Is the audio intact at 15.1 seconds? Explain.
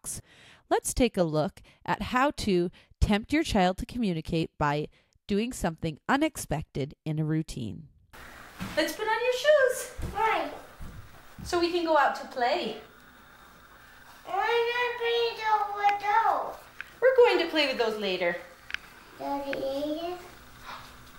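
Yes, at 15.1 seconds the audio is intact, with no dropout, click, distortion or other fault at that point.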